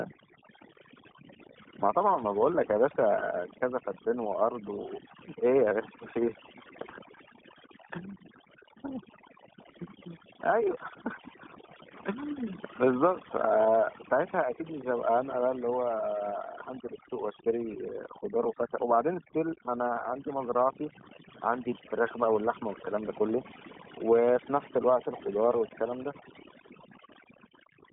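A speech recording carrying two faults from start to finish. Overdone noise removal has pulled the background down, leaving twinkling specks where individual frequency bands flicker on and off. The quieter parts of the voice are cut along with the noise. That flickering tells it apart from a simple gate or a low level, which would leave a steady texture. On top of this, the iLBC codec confines everything to a narrow telephone band, roughly 150 Hz to 3.5 kHz, with nothing at all above 3.8 kHz. The speech stays intelligible but has a plainly audible rough, synthetic edge. The grain of that roughness fits iLBC's 30 ms frame mode. Unlike plain band-limiting, the damage here is a grainy texture inside the band, not just missing highs.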